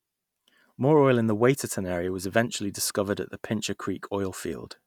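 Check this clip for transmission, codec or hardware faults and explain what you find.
I checked the clip and found no faults to explain.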